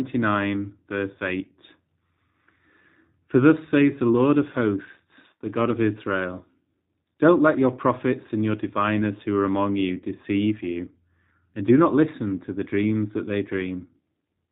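From start to finish the speech carries G.729 codec damage. Nothing above 4 kHz survives, and the voice is rebuilt from a vocal tract filter, pitch predictor and sparse pulses, giving a plainly rough, synthetic texture consistent with an 8 kbit/s VoIP stream.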